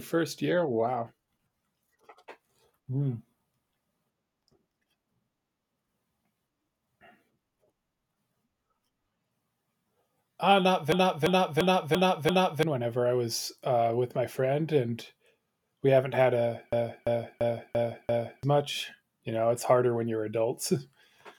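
Speech with two system hang loops, at 10.92 to 12.63 s just before "whenever I was uh" and at 16.73 to 18.43 s after "we haven't had a". Each time a 341 ms segment repeats five times as a 2.93 Hz stutter, which fits a stalled driver recycling a 16384-sample buffer and losing about one and a half seconds of sound.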